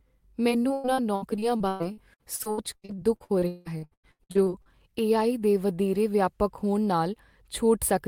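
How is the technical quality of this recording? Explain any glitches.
The recording has one clear problem. From 0.49 to 4.68 s, choppy, robotic speech from repeated packet loss: dozens of holes, up to 181 ms, patched by extending the preceding sound, covering about 37% of that stretch.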